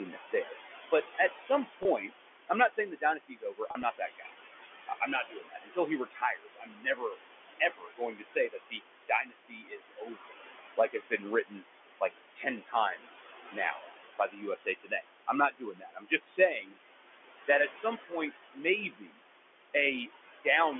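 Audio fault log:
throughout, noise suppressor artifacts: The suppressor estimates the steady room noise and pulls down every band it judges to be noise, frame by frame, by about 20 dB. Because the room noise sits only about 9 dB below the speech, the gating is busy: the background drops away in pauses and swells back under each phrase.
0.13–4.31 s, 4.87–16.77 s and 17.48–20.47 s, speech cut by the noise suppressor: In these stretches the same suppressor misreads parts of the speech itself as noise and turns them down with the background, at worst by about 21 dB. Soft consonants, word endings and quieter moments come out swallowed or faint, adding up to roughly 1.5 s in the first span, about 5 s in the long middle span and under a second in the last.
1.83–1.85 s and 3.69–3.83 s, packet loss with pitch repetition: Audio packets failed to arrive, and the receiver filled each gap by repeating the last pitch cycle. 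The first loss is a single 20 ms hole, heard as a brief held, buzzy tone. The second removes 60 ms in pieces spread over 140 ms, the longest piece 40 ms, which fits several 10 ms packets going missing. That gives a stuttering buzz that thins toward silence before the speech cross-fades back.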